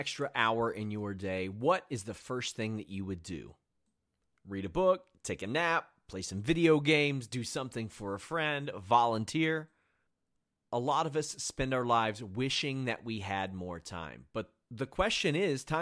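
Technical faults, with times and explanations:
No technical faults heard.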